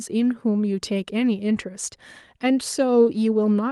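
No technical faults can be heard anywhere in the recording; the speech signal stays continuous and steady throughout.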